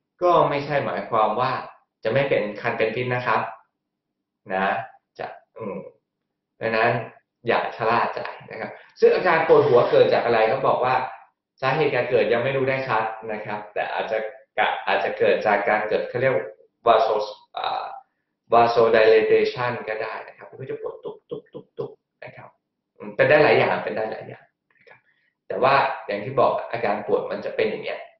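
Nothing stood out as a technical fault on listening to this audio.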